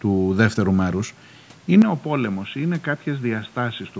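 At 1.82 s the speech abruptly narrows in band, drops roughly 10 dB and gains a new noise floor, with no gap: likely an input switched to a poorer device, not merely filtering.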